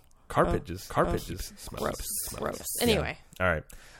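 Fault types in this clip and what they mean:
Doubled audio track: from 0.90 to 2.98 s a second, equally loud copy of the speech trails about 0.7 s behind, likely from a slower duplicate capture path.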